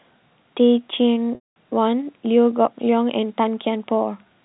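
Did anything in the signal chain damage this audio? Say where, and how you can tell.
Yes. The damage happened at the network stage. Packet loss with pitch repetition cut out about 210 ms of speech from 1.35 to 1.56 s, a gap that fits a run of roughly twenty lost 10 ms packets. The receiver covered the hole by looping the last pitch period. You can hear it as a briefly held, buzzy tone that fades to silence within about 50 ms. The speech then returns through a short cross-fade. The G.711 telephone band around it sounds intact.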